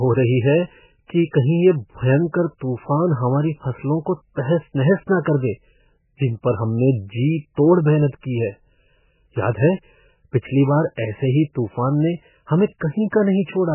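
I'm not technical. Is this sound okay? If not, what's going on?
No. The speech sounds muffled and watery all the way through. Nothing above about 3 kHz survives, so the crisp top is gone. The cause is likely heavy MP3 compression, which discards detail to shrink the file and leaves a swirly, underwater quality.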